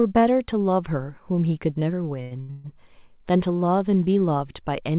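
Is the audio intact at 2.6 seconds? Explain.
No. Repeated stalls (stutter) run from 2.22 to 2.69 s: the jitter buffer ran dry four times, so earlier sound was stretched to fill, making it drag and stutter.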